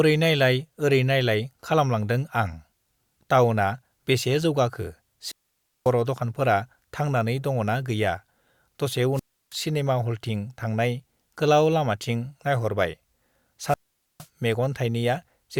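Wireless microphone squelch dropouts occur at 5.23–5.93 s, 9.14–9.55 s and 13.64–14.28 s. Each time the FM radio link weakens, hiss briefly swells, then the receiver's squelch mutes the speech into near silence for 545, 325 and 461 ms before it returns.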